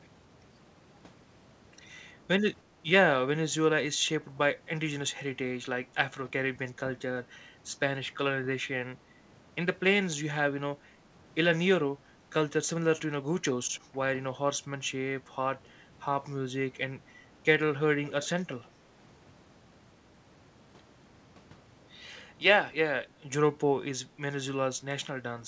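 A speech recording from a call, where the far end's echo canceller most likely failed to remove all of its loudspeaker sound from its microphone, so an echo leak sends a scrap of the voice back. From 18.07 to 18.28 s, a faint copy trails the speech by about 350 ms, roughly 20 dB quieter, heard as a brief ghostly repeat. The call path's band limit, with nothing above 8 kHz, fits a G.722 wideband codec.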